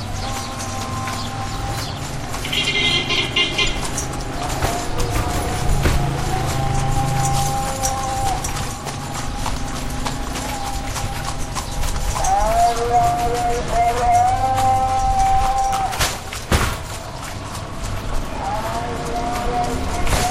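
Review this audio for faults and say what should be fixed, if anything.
A corrupt frame decoded is audible from 3.65 to 3.68 s. Flipped bits in a couple of compressed frames were played anyway. Misread gains and codes put energy at wrong frequencies. The result is a short, fairly loud burst over the sounds. Prevent it with frame checksums and concealment of damaged frames instead of decoding them.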